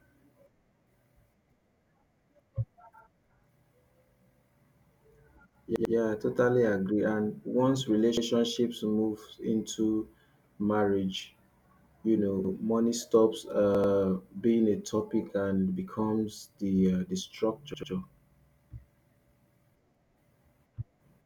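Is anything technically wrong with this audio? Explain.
Yes. The speech has a repeated buffer fault five times, at 5.76 s (before "I totally agree"), 8.17 s, 12.45 s, 13.75 s (after "you know money stops", before "being a") and 17.74 s (after "uh the"). Fresh audio missed its deadline, so the last block of about 93 ms, which fits a 4096-sample buffer, played again. It played twice more at 5.76, 13.75 and 17.74 s and once more at the other two times. Each repeat is heard as a short stutter with hard joins. A waveform shows identical 93 ms segments side by side with abrupt edges, and a spectrogram shows a copied patch with vertical lines at each seam.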